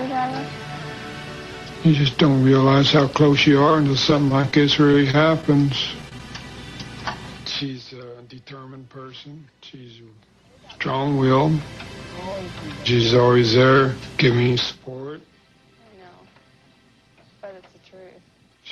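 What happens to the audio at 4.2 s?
Around 4.2 s the sound turns choppy, with brief clipped-out slivers and pieces missing. It is repeated packet loss, running from 4.10 to 4.53 s. The sound points to about five short dropouts, none longer than about 20 ms. Each hole is papered over by stretching the last received audio, so roughly 13 percent of that stretch is synthetic fill.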